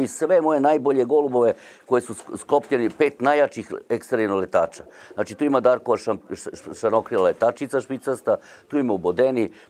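Nothing technically wrong turns up anywhere in the audio, so there's no fault here to point to.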